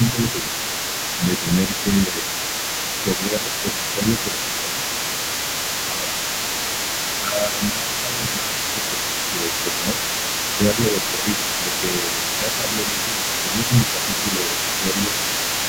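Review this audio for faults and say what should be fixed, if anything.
The echo canceller likely failed to tell the talker from the loudspeaker echo during double talk and turned both down, so speech is suppressed in double talk at 0.0–0.6, 1.18–2.27, 3.04–4.86, 5.9–6.11, 7.22–10.01 and 10.75–15.15 s. The voice dips by about 5 dB in pieces. A double-talk detector that holds suppression back while the near end is active would prevent this.

Residual echo was likely left in the microphone signal, so the other side's voice leaks through for the whole clip, sitting only about 5 dB below the talker's speech. Better echo-path modelling with stronger residual-echo suppression, or a headset, would prevent it.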